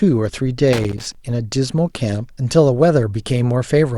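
Loose connector crackle runs from 0.73 to 1.15 s in this speech. A worn or dirty contact is making and breaking as it shifts, chopping the signal on and off, and any DC on the line turns each break into a pop, heard as an irregular burst of scratchy crackle.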